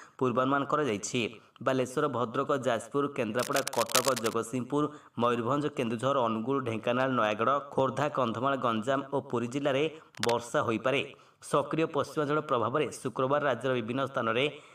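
From 3.38 to 4.34 s, and again briefly from 10.15 to 10.33 s, cable scratch noise appears: dense, irregular crackling and rustling only a little below the signal level, most likely from a worn cable or connector being moved and its contact resistance fluctuating.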